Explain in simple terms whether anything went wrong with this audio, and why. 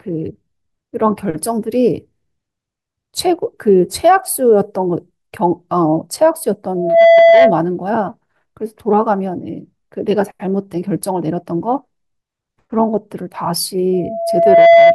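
Twice in this speech clip you get loudspeaker feedback squeal: from 6.75 to 7.64 s, and again from 13.93 s to the very end at 14.94 s. The microphone picked up the speaker it was feeding, and at 672 Hz the loop kept amplifying itself, so a single steady tone swells up over the talking. The first one rises in about a third of a second. The second builds more slowly, over most of a second, and is still going when the audio ends.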